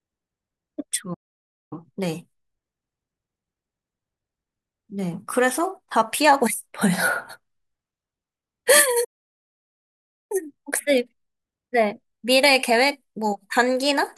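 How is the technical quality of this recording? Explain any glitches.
The speech has two interruptions, each followed by a hurried stretch.

Playback stall, at 1.14 to 1.73 s and 9.04 to 10.32 s: the player likely ran short of data or was blocked, so output drops to silence for about 0.57 s and 1.26 s.

Time-compressed catch-up, at 1.73 to 4.73 s and 10.32 to 13.32 s: the player trims its backlog by splicing out tiny pieces, so the speech runs about 1.1 times fast at normal pitch.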